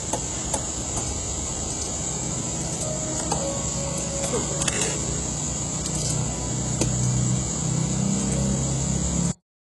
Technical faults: HE-AAC compression; cut-off end

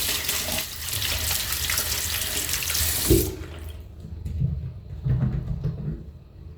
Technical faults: sudden gain jump

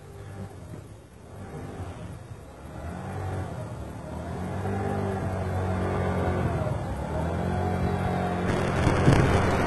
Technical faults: HE-AAC compression; buffer tearing

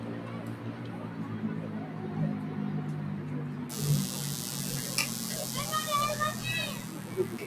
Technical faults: noise suppressor applied to music or sounds

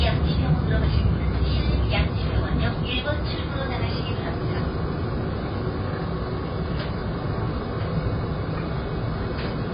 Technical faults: AAC compression

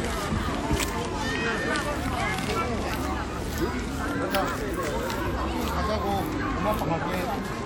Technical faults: train of clicks

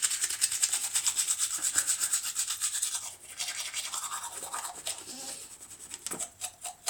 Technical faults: none

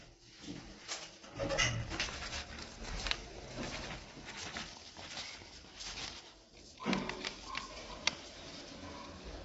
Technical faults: low-delay AAC compression

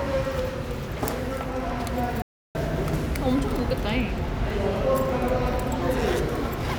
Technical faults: playback stall

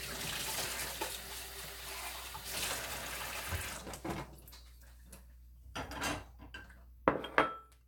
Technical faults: none

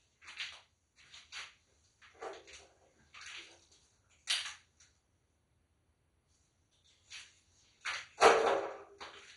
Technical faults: MP2 compression

